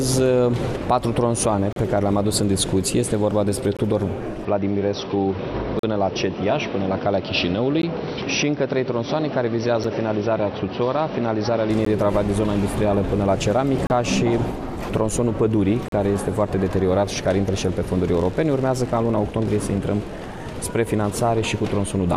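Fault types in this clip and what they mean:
Gap between stream segments: the time stamps of consecutive chunks of the stream don't quite meet, so the player pads each seam with silence. Hard-edged holes of about 6 to 40 ms cut into the sound once every 2 s, from 1.73 s through 15.88 s, eight times in all. The longest are near 5.79 s and 15.88 s, and the shortest is at 9.84 s. Nothing is missing; the sound simply stalls briefly and resumes.
Input switched to a poorer device: the recording chain likely changed over to a lower-grade microphone or a headset's call profile partway through, which narrows the band and brings its own noise. From 4.45 s to 11.70 s the sound turns dull, with nothing above 5.9 kHz, and a faint new noise floor sits roughly 55 dB under it. There is no silence at the changeover and no noticeable jump in loudness.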